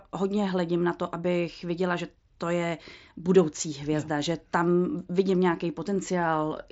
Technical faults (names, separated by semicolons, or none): none